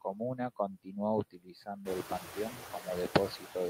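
Noise suppressor artifacts run through the whole recording. The suppressor estimates the steady background in each frequency band and turns those bands down frame by frame, here by about 7 dB. What survives is not a smooth, lower hiss but a residue that sinks between the words and rises under them. Plain background noise would sit evenly under everything. This residue keeps shifting in level from moment to moment.

Speech cut by the noise suppressor first appears from 0.75 to 0.97 s, and again from 1.31 to 1.87 s. In each span the suppressor mistakes part of the speech for noise and pulls it down with the background, by as much as about 21 dB. Roughly 0.15 s is affected in the first span and about 0.4 s in the second. Those stretches sound swallowed and faint, with softer sounds and tails fading out. A dropout would leave a hard gap. Here the sound sinks smoothly into the background.

Around 2 s the room noise rises by about 13 dB and then sits about 11 dB below the speech. 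That rise belongs to the room itself and is not caused by the processing.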